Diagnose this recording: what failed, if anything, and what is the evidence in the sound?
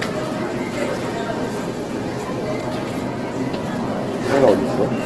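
The whole clip is grainy and rough, with tones smeared into noisy fizz and nothing above 12.1 kHz. That's likely Opus compression at the codec stage, in its CELT music mode, filling starved bands with folded energy or noise, which fits a bitrate around 12 kbps.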